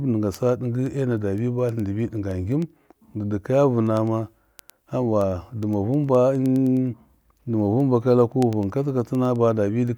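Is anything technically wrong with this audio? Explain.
Yes. From 0.14 s to 9.88 s there are word clock ticks: the receiving device runs on its own clock, roughly 200 parts per million off, so about every tenth of a second a sample is slipped. Unlike random clicks or crackle, these roughly hundred sharp, uneven ticks keep a steady rhythm.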